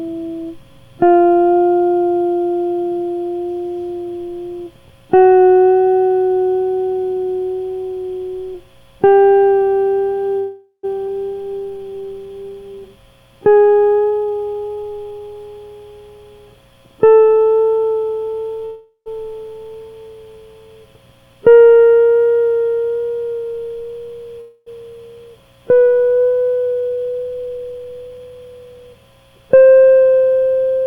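A music recording carries three call audio freezes, a skip ahead, and a jitter buffer slow-down and speed-up. The freezes fall at 10.39–10.85 s, 18.65–19.11 s and 24.41–24.68 s. At each one the music stops advancing and the last moment of sound is held as a fading buzz or hiss. That lasts about 0.44 s, 0.41 s and 0.26 s respectively, and the first two decay into roughly 70 ms and 80 ms of silence. The likely cause is delayed packets leaving the jitter buffer empty, so the receiver padded the wait. Nothing is lost, and the music resumes where it paused. On a spectrogram each freeze shows as smeared, horizontally stretched bands that thin out, with a blank strip before the first two restart. In the waveform the envelope tapers toward zero. At 11.07–11.10 s the music skips ahead: roughly a fifth of a second is dropped and the two sides are butted together almost directly. This takes back part of the delay just built up by the first freeze. 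In the spectrogram it looks like an abrupt vertical seam where the harmonic content changes without transition, and the waveform shows a sudden shift in shape with no gap. From 11.34 to 12.89 s a jitter buffer slow-down plays the music at about 87% of its speed while keeping its pitch. Short pitch-period repeats add 211 ms, so sustained tones are drawn out and can waver slightly. Spectrally, harmonic lines stay at the same heights but events are spaced wider apart, and repeated near-identical cycles appear in the waveform. Then from 13.96 to 15.35 s a jitter buffer speed-up runs at about 131%. It removes around 0.4 s in small pitch-period cuts, so the tempo rushes unevenly at unchanged pitch. On a spectrogram the onsets crowd closer together, and the waveform shows compressed rhythmic spacing.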